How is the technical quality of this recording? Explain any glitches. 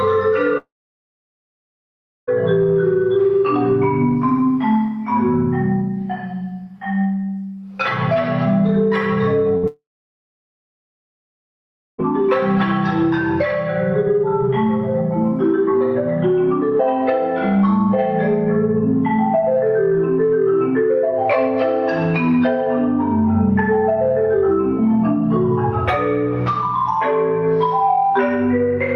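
The recording has three network glitches: two long gaps and one short burst of loss just before the second gap.

At 0.57 s the audio cuts out until 2.29 s. There's a very short tail of the last sound, then about 1.6 s of silence, and the audio comes back with roughly 1.7 s of material gone. The same thing happens from 9.67 to 12.00 s: a brief carry-over, about 2.2 s of silence, and about 2.3 s missing. That pattern is a long network dropout. The likely cause is that nothing arrived for that whole stretch, so the receiver ran out of sound to stretch and just went quiet.

At 9.57 s, about 60 ms of audio is lost in a burst of packet loss. The receiver covers the 58 ms hole by continuing the last sound and fading it down, then jumps ahead, so you hear a tiny smeared blip and a small skip. It's followed about 20 ms later by the second dropout.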